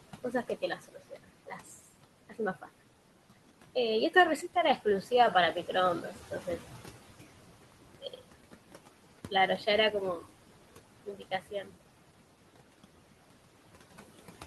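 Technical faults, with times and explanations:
Throughout, noise suppressor artifacts: the suppressor pulls down every band it judges to be steady noise, about 17 dB, frame by frame, so the room noise, about 13 dB below the speech, dips in pauses and swells back under speech.
0.24–1.68 s, 2.02–2.69 s, 4.1–5.07 s, 6.02–6.48 s, 8.01–8.19 s, 9.3–10.24 s and 11.06–11.73 s, speech cut by the noise suppressor: the suppressor mistook quiet parts of the speech for noise and turned them down by about 9 to 18 dB. Soft sounds and word endings go faint or swallowed, most in the first span, for over half a second.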